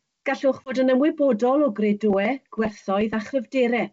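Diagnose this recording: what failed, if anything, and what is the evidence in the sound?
Hard 20 ms silence at 0.65 s, then distortion settling by 0.76 s: network packet loss on an ADPCM call, desyncing decoder prediction.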